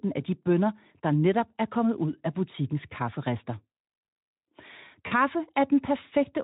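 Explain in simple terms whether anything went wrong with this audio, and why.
VoIP packet loss concealed by the speech codec, at 5.07 to 5.13 s: about 40 ms of speech never arrived, which fits two lost frames. The Speex decoder filled the gap by stretching the last sound into a fading smear, and the voice stays briefly weak afterwards.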